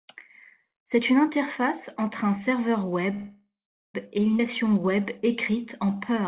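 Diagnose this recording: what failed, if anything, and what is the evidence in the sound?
Network stage: from 3.14 to 3.96 s the sound trails off into a fading buzz or hiss, then about 0.43 s of silence, before resuming intact. That's likely a call audio freeze from late packets.

Network or jitter buffer skip ahead at 4.38–4.41 s: playback jumps forward with barely a gap, dropping roughly 0.4 s of audio and splicing the two sides almost directly.

Jitter buffer slow-down from 4.63 to 6.22 s: repeated pitch periods stretch the audio to 92% speed at the same pitch, adding 127 ms to rebuild the buffer's reserve.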